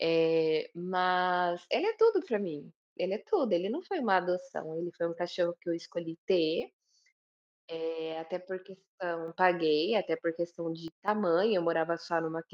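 Speech with two sudden gain jumps: the level drops by about 6 dB from 6.6 to 9.28 s and by about 12 dB from 10.88 to 11.08 s, background noise falling and recovering in step, likely from a digital gain change applied instantly without a ramp.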